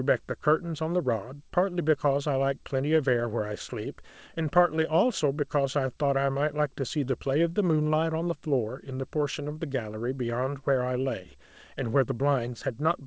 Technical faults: short concealed packet loss

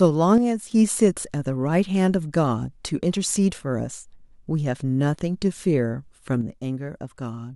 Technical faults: one channel drops out

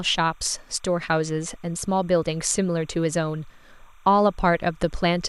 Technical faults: timecode bleed

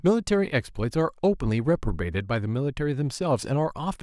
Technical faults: none

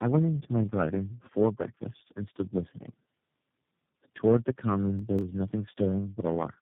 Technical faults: tandem speech coding; processor overload crackle

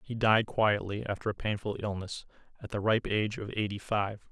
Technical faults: none

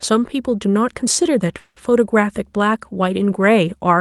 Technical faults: call audio freeze

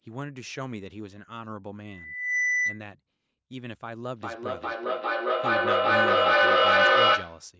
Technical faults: loudspeaker feedback squeal; feedback echo between two devices

